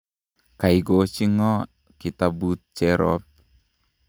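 No technical faults can be heard anywhere in this speech recording. There is no moment in it that calls for a time or an explanation.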